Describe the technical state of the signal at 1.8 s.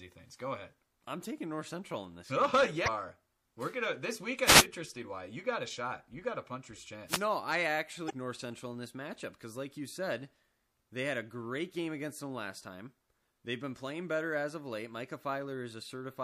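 At 1.8 s the speech carries MP3 compression damage, present across the whole clip. It is likely a bit-starved encoder, consistent with around 64 kbps, dropping weak frequency lines frame by frame. Unlike a plain low-pass filter's steady dullness, this swirls and chirps watery on s sounds.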